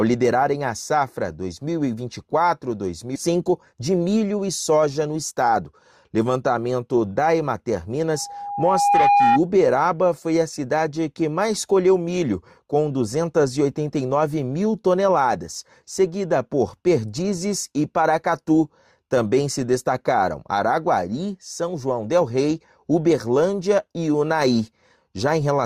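Skip ahead at 3.15 s: a bit under a second of audio was discarded while later audio waited, so playback jumps forward with almost no gap.

Jitter buffer speed-up, 3.27 to 5.61 s: the overfull buffer trims tiny pitch-period slices repeatedly, running about 10% fast at unchanged pitch and sounding hurried.

Loudspeaker feedback squeal, 8.13 to 9.40 s: the microphone-to-speaker loop exceeds unity gain at 811 Hz, swelling over roughly a second to about 5 dB above the sound.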